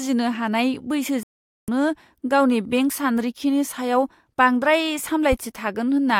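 At 1.23 s the speech cuts out in a digital broadcast dropout and stays silent until 1.68 s. For about 0.45 s the receiver was muting because frames arrived corrupted or not at all, which points to a short run of consecutive lost frames. Whatever was spoken in that gap is gone, not just quieter. On a waveform this is a flat line of digital silence. On a spectrogram it is a blank vertical band across every frequency.

From 5.32 to 5.35 s a single loud pop sits on top of the speech, which carries on underneath. It peaks a few decibels above the surrounding level and sounds like a sharp click or thump. The likely cause is a sudden voltage step or pulse, such as a connector, switch or driver glitch, that was shaped by the downstream circuitry. The waveform shows a tall, narrow spike. The spectrogram shows a thin bright vertical stripe reaching high in frequency.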